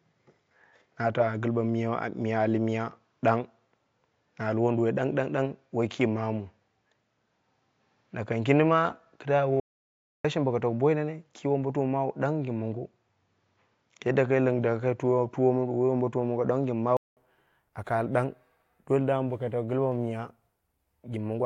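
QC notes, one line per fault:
0.00–17.17 s, input switched to a poorer device: for the first 17 seconds or so the speech sounds dull and boxy, with nothing above 7.3 kHz, a different noise floor sitting around 50 dB under the voice, and a level about 5 dB off. At 17.17 s there's a roughly 200 ms gap and then it opens up. That's likely the recorder capturing through a narrower-band mic or headset profile before switching back to the proper input.
9.60–10.25 s, audio dropout to silence: the speech cuts out for about 645 ms into dead silence, with no room tone at all in the hole, then picks up again. Because the gap is silent rather than quiet noise, the input was likely lost for a moment, perhaps a link hiccup or a brief mute, while the recorder kept writing. Anything said in that stretch is gone.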